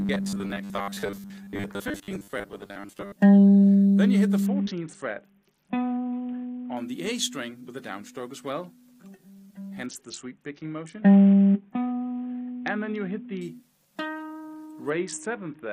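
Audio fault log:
0.01–3.14 s, robotic sound from repeated short buffers: the sound turns into a rigid, metallic buzz pinned at 100 Hz, loosely tracking the underlying audio but losing its natural movement. The likely cause is new audio arriving too rarely, so playback keeps looping the last short chunk, about half of what is heard is repetition, while real material is skipped. A 100 Hz buzz fits a repeated chunk of 10 ms.
4.46–6.77 s, 9.86–13.41 s and 14.90–15.72 s, Bluetooth SBC bit pool drop: in each stretch the treble dulls and a gritty, grainy noise rises, clearing only when quality recovers. The sound points to the SBC encoder cutting its bit pool from 28 to 6, about 60 kbps, to keep a congested link alive. With so few bits the top sub-bands are starved and the remaining ones are coarsely quantised.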